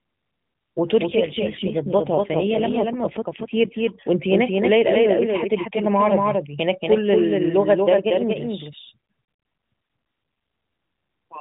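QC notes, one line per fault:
Throughout: doubled audio track. A second full-band copy trails by about a fifth of a second, a few dB quieter, with no decay. It is likely a second capture path.
1.06–3.91 s: AMR rate drop. The speech turns rougher and more synthetic, with no gap and the band still capped at 4 kHz. This fits a drop from 12.2 to 5.9 kbps.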